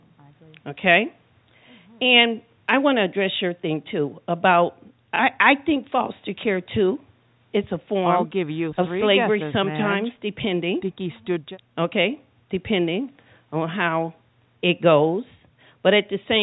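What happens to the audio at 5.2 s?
Packet loss with the last packet repeated occurs from 5.16 to 5.19 s. About 30 ms of speech goes missing, which fits a single lost packet, and the receiver replays the previous stretch to fill the gap. That single repeat sounds like a small blip.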